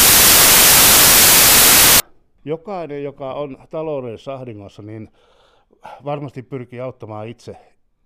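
A speech clip whose opening, from 0.0 to 2.0 s, is buried under loud, harsh broadband noise from samples built from the wrong bytes: misassembled bytes turn the fast-changing low bits into each value's dominant part.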